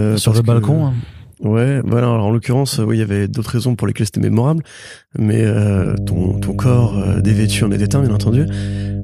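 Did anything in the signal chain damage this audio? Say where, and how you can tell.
Yes. Mains hum enters in the analogue wiring. A steady 50 Hz tone starts at 5.74 s, after "lesquelles c'était mémorable mais", and runs to the end. It sits roughly 5 dB below the speech, from a ground loop or transformer coupling.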